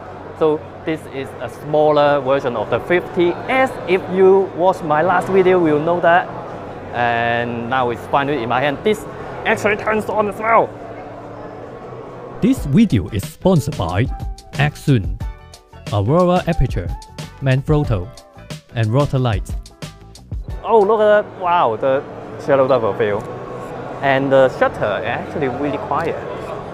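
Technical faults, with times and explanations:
No technical faults are heard, so there are no times or explanations to give.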